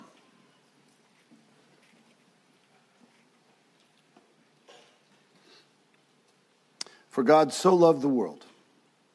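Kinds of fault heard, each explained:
Nothing here stands out as a fault to my ear, so there's no kind of problem to list for this one.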